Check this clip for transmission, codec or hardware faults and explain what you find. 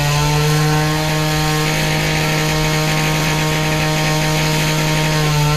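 One fault turns up in this everyday-sound clip. From 3.21 to 3.34 s, frames play out of order: two adjacent 64 ms blocks, each consistent with a run of three frames, arrived swapped and were decoded that way. The result is a garbled flutter. Unlike a dropout or repeat, nothing is missing or duplicated and no time is lost.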